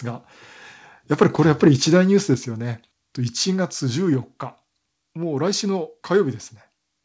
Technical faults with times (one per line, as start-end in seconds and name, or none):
2.34 microphone volume stepped down